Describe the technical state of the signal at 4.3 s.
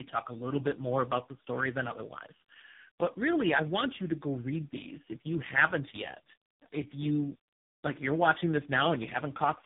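At 4.3 s, as throughout the clip, the speech sounds rough, muffled and warbly, with nothing above 3.8 kHz. This is tandem speech coding: three speech coders in series, the last resembling low-rate AMR-NB, each re-encoding the previous one's already degraded output.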